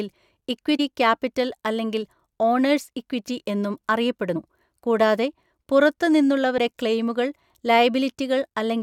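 Speech with damaged data in a compressed stream: corrupted frames throw the decoder off sync, giving brief glitches at 0.79 s (just before "ക്യാപിറ്റൽ അല്ലെങ്കിൽ ഓണേഴ്സ് ഇക്വിറ്റി"), 4.35 s and 6.57 s.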